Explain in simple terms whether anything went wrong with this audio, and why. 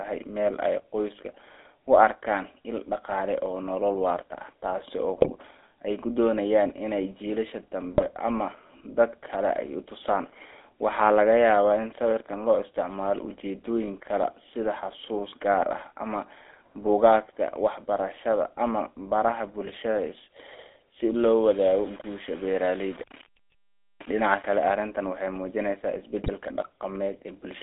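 The speech passed through the GSM full-rate codec, an old mobile-phone voice coder that rebuilds speech from a simplified model and discards everything above about 3.6 kHz. Throughout the clip, the speech sounds muffled, buzzy and gravelly.

GSM bit errors occur at 5.17–5.31, 7.94–8.05, 19.66–19.77 and 26.23–26.31 seconds. Corrupted data reached the decoder, which then rebuilt a few short frames wrongly. Each of these moments becomes a brief squawk, pop or gargle.

From 21.44 to 24.63 seconds, the sound turns grainy and gritty, and its quietest parts sputter or drop out. This is likely low bit depth without dither: the audio was rounded to very few levels, roughly seven bits' worth, so the distortion follows the sound.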